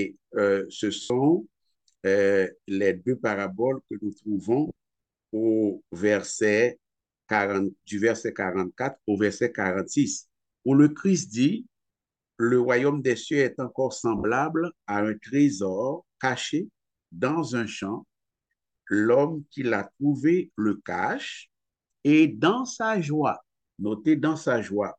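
Lost LE Audio frames occur at 1.02 s (80 ms), at 4.68 s (50 ms lost in bursts across about 80 ms, the longest around 30 ms) and at 14.18 s (60 ms). Each time, the LC3 decoder fills the missing stretch by repeating the last good spectrum with randomised signs, then fades it. Tonal content smears into a brief hiss-like blur, and the 80 ms gap sinks toward silence before the sound returns.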